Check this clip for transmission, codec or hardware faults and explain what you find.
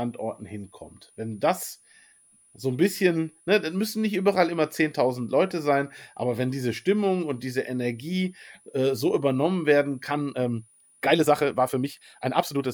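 Two faults are present. A switching supply whistle runs through the whole speech clip: a thin tone near 10 kHz, wandering between 9.6 and 9.9 kHz, about 35 dB below the speech. A power converter cycling in audible burst mode, or beating with another supply, produces it. The drifting pitch separates it from a fixed mains hum or a steady test tone.

From 10.06 s to the end, just after "äh so übernommen werden", the pace jumps to about 1.44 times normal and sounds rushed, yet the pitch stays put. This is a time-stretched section, likely from software dropping short slices to shorten the audio. Plain faster playback would also raise the pitch.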